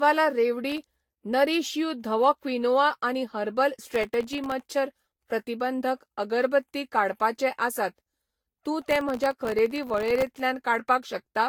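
Throughout the speech there is generation loss: a swirly, hollow, smeared quality with blurred consonant attacks, likely from around seven passes through a lossy codec such as Vorbis at a modest bitrate. A spectrogram shows ragged spectral holes, smeared transients and nothing above 19.3 kHz.

Processor overload crackle appears from 0.70 to 1.23 s, 3.92 to 4.66 s and 8.82 to 10.40 s as gritty tearing over the speech. Dozens of missed sub-millisecond buffers each drop to silence, so the waveform shows dense, hard-edged dropouts and the spectrogram shows broadband vertical streaks.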